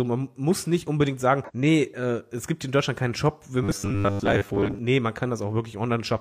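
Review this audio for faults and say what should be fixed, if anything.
Between 1.44 and 1.51 s, the compressed stream carried damaged data: some bytes were lost or overwritten, so the decoder misread the frames there, lost sync and searched for the next valid frame header. The speech is disrupted for about 60 ms as playback resumes from the next good frame. Preventing this means delivering the stream over a checked transport and having the decoder verify frame checksums before output.

From 3.64 to 4.79 s, the playback path was likely starved of new audio and filled the gaps by replaying its last short buffer again and again, so much of the real speech in that stretch was skipped. Each repeat lasts about 10 ms, which stamps a fixed 100 Hz pitch onto the sound and turns the voice into a rigid, metallic buzz that only loosely follows the words. Preventing this means enlarging the playback buffer and giving the audio thread priority so it never runs dry.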